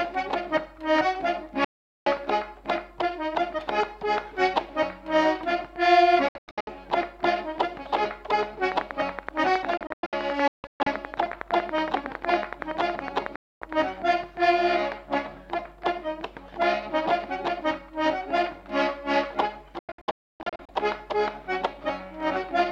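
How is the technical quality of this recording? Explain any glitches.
Technical quality is poor, marred by repeated signal loss and a stretch of interference.

Digital broadcast dropout occurs at 1.64 to 2.07 s, 6.28 to 6.68 s, 9.77 to 10.87 s, 13.36 to 13.62 s and 19.79 to 20.69 s. The receiver mutes whenever frames arrive corrupted, so the sound snaps to silence within about 3 ms and leaves holes. The first and fourth are single gaps. The others break into several short holes, the longest 288 ms near 20 s. The missing audio is gone for good.

A train of clicks runs from 8.72 to 13.83 s: about fifty sharp, evenly spaced ticks at 10.8 per second, roughly 15 dB above the sound. They are likely caused by nearby electrical interference and are heard in pauses too.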